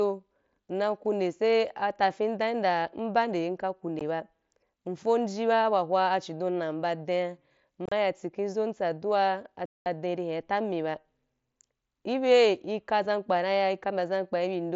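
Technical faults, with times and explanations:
3.99 s, 7.86–7.92 s and 9.66–9.86 s, unconcealed Bluetooth headset packet loss: voice packets between headset and phone failed to arrive, and the receiver played silence or an idle pattern in their place instead of patching over them. The result is holes with hard edges in the speech. At 3.99 s the hole is about 15 ms. Around 7.9 s the losses come as a brief chop, about 52 ms missing across 60 ms with the longest gap 30 ms. At 9.66 s there is a 0.2 s dropout. The wideband mSBC link carries the speech up to 8 kHz on either side of each gap.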